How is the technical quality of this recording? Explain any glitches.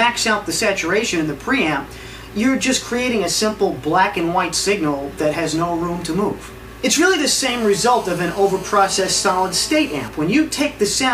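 The recording has one glitch. GSM phone buzz from 7.49 to 10.08 s: a nearby 2G phone's radio bursts, repeating 217 times a second, get rectified by the audio circuitry into a steady, harsh, harmonic-rich buzz about 18 dB below the sound.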